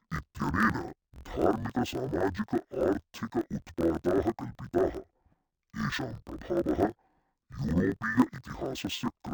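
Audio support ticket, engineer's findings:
Interleaved audio read as planar, whole clip: speech an octave down, doubled and choppy, with pace normal and a grain at about 43 Hz. Probably the deinterleave stage splitting each roughly 23 ms block (fits 1024 samples) in half instead of alternating.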